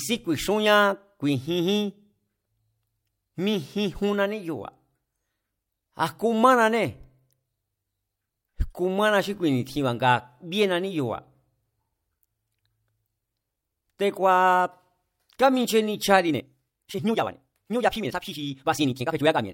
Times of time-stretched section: 16.26-19.53

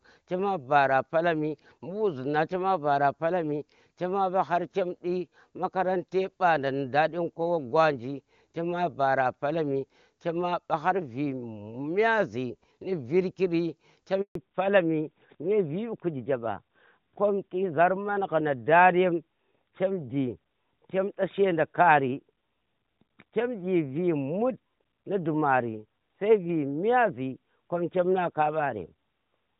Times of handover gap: 14.21-14.35

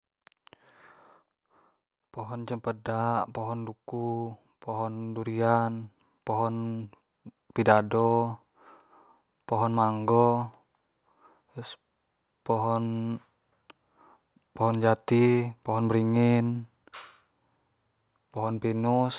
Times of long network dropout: none

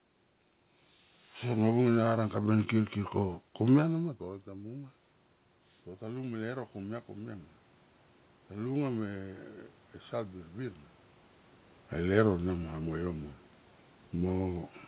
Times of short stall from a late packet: none

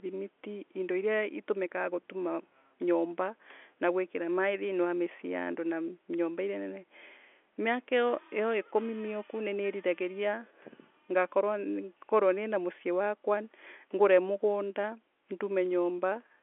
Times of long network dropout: none

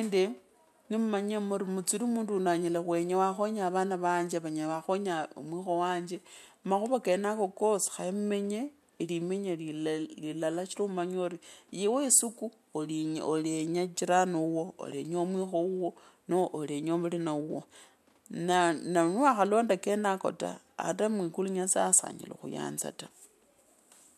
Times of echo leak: none

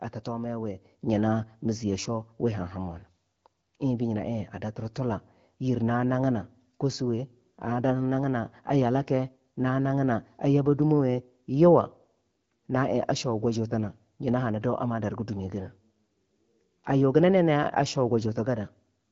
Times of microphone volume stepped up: 1.02

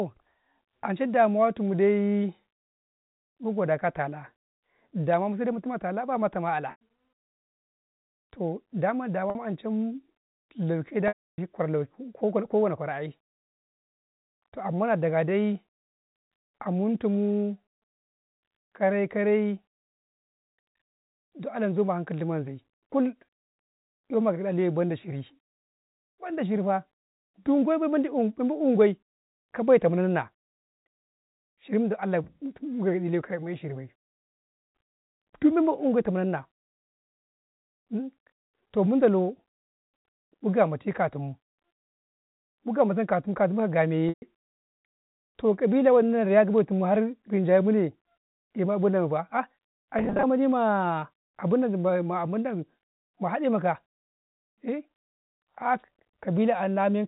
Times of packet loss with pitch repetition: 6.71-6.78, 9.30-9.35, 11.08-11.38, 44.09-44.22, 49.99-50.23

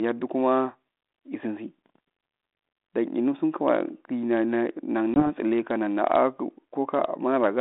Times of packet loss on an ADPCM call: 5.14-5.28

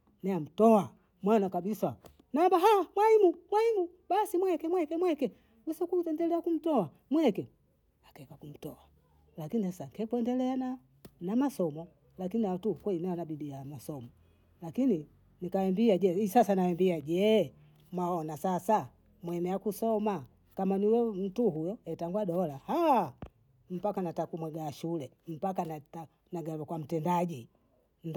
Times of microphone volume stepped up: none

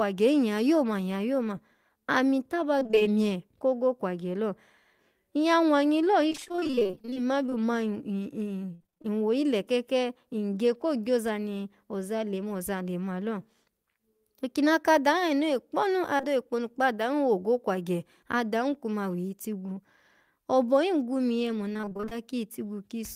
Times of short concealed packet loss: 16.17-16.25

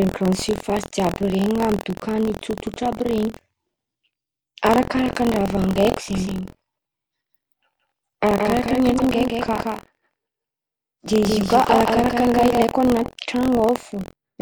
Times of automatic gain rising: none

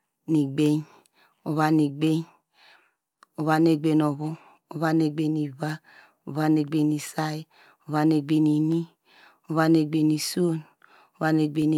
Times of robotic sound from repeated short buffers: none

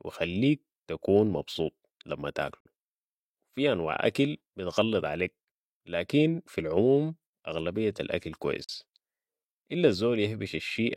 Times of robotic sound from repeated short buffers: none

